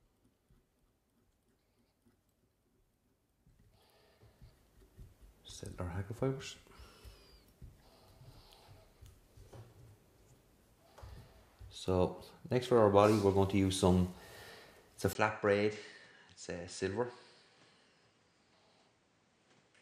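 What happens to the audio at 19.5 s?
At 19.5 s the audio is inside a stretch that runs from 15.13 s to the end of the clip. The likely cause is an input switched to a poorer device partway through recording. A gap of about 20 ms marks the change at 15.13 s. After it, nothing is heard above 9.3 kHz. The level drops by roughly 10 dB. A new background noise also appears, sitting around 35 dB below the signal.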